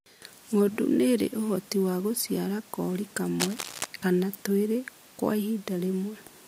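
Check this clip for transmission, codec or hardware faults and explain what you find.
There's one hardware fault here, a burst of cable scratch noise. It runs from 3.40 to 3.86 s, right after "ũhoti wa gũciara kori" and just before "kana twĩrĩ kwa". A dense, ragged rustle sits over the speech, only a few dB below it. That's likely a worn cable or connector being moved, with its contact resistance flickering.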